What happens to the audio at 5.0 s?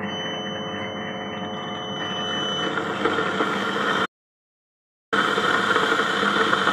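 At 5.0 s the clip sits inside an audio dropout to silence running from 4.06 to 5.13 s, so about 1.06 s of the sound is simply missing. The input was likely lost for that stretch while recording carried on writing silence. Unlike a quiet passage or a noise gate closing, the gap holds no room tone or hiss at all, and the sound stops and resumes abruptly rather than fading.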